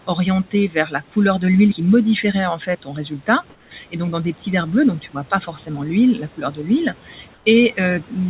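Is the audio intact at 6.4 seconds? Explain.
No. At 6.4 seconds the speech is cut by the noise suppressor. The cut runs from 6.37 to 6.59 s. The suppressor mistook part of the speech for background noise and turned it down with the noise. The deepest drop is about 10 dB, and about a tenth of a second of sound is affected in all. Quiet consonants or a word ending in that span sound swallowed and faint, as if the talker briefly pulled away.

The same moment also carries noise suppressor artifacts, which run through the whole clip. The suppressor treats each frequency band it judges to be steady noise separately, frame by frame, and cuts it by about 12 dB. The residual background sinks in gaps and swells under the speech. At 6.4 s that pumping sits right where the speech is cut. The band-limited, telephone-like tone, with nothing above 4 kHz, comes from the call codec, not the suppressor.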